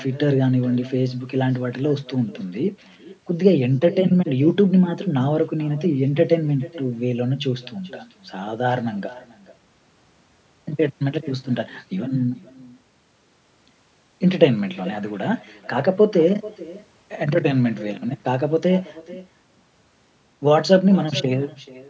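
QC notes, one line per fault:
Throughout, echo with no canceller: each phrase returns about 20 dB quieter, roughly 0.4 s later, thin. The far end's loudspeaker feeds its microphone uncorrected.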